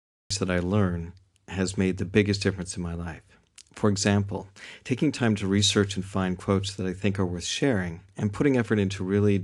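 The clip opens with a cut-off start. From 0.0 to 0.30 s there is only digital silence, and the speech then appears abruptly at about 0.31 s, already mid-sound rather than rising from a natural attack or fade-in. Capture or streaming evidently began late, after the talker had started, so the opening portion of that sound was never recorded, and the audio jumps straight from silence to full level.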